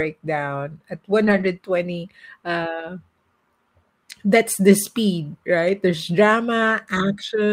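Lost packets rebuilt from error correction at 1.23–1.45 s and around 2.79 s: no gap, but the decoder played low-bitrate backup copies, so those stretches turn briefly rough and noisy.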